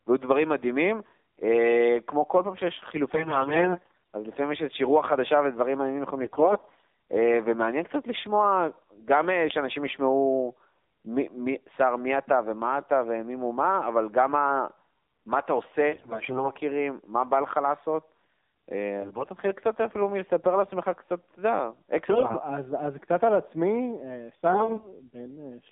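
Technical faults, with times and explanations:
Throughout: AMR narrowband mobile codec. The speech sits in a telephone band of roughly 150 Hz to 3.7 kHz, with nothing above it, and has a plainly buzzy, synthetic edge. That edge fits a low AMR-NB mode around 7.4 kbps, where each 20 ms frame rebuilds the voice from a vocal-tract model driven by only a few pulses. It differs from the bursts below because the coloration is steady and present everywhere.
3.14–3.98 s, 6.22–6.82 s, 15.92–16.51 s, 18.99–19.28 s, 22.10–22.34 s and 24.50–24.96 s: AMR bit errors. In each burst the voice turns hoarse, scratchy and gargly, most harshly at 15.92 s and 3.14 s and more mildly at 18.99 s. Flipped low-priority bits put the excitation pulses in wrong positions and skew the fine gain and spectral values. Pitch and level hold roughly steady, and nothing drops out or mutes as in lost frames.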